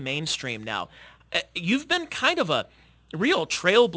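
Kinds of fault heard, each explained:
Aliasing: The speech sounds like it was dropped to a lower sample rate without a proper anti-alias filter first, and the fold point at 8 kHz fits a 16 kHz rate. Everything that sat above 8 kHz didn't vanish; it mirrored back down into the band as unrelated, inharmonic junk, around 20 dB under the signal. You hear it throughout as gritty, metallic sibilants, with the spectrum running hard right up to that 8 kHz edge.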